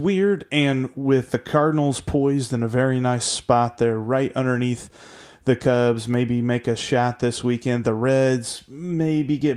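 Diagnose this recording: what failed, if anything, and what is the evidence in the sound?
Nothing failed in this recording, and no fault shows up anywhere in the sound as evidence.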